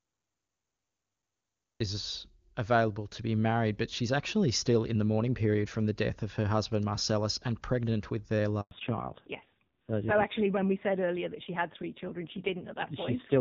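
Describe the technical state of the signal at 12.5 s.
At 12.5 s you're in the middle of a fallback to narrowband, which starts at 8.71 s, right after "and pregnant with their", and runs to the end of the clip. The call drops from the clean HD Voice wideband codec used earlier to an older narrowband one, and the sound points to a low-rate mode of around 6 kbit/s. Nothing above 4 kHz gets through, so the speech turns duller and rougher.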